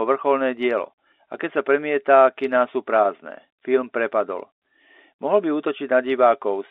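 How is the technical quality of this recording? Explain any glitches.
There are no glitches to explain in this speech recording. It has the narrow, band-limited sound of G.711 telephone coding, with nothing outside roughly 300 Hz to 3.7 kHz, which fits a standard 64 kbps mu-law phone line.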